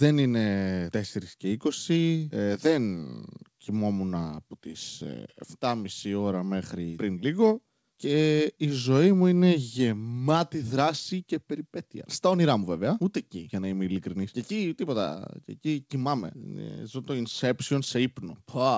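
From the start, there is clock drift between sender and receiver. The sending clock runs roughly five percent fast. Audio arrives quicker than the receiver plays it out. The jitter buffer keeps filling. Playback gains a faint, restless unevenness in pace.

From 0.02 s to 18.68 s, there are repeated timing corrections. The receiver trims short pieces to keep the buffer from overflowing, and the material comes through at 105 percent speed. The cuts are small and unevenly spaced. They sound like slight hiccups and a wobbly tempo. The call path cuts everything above 8 kHz, which fits G.722 at 64 kbps.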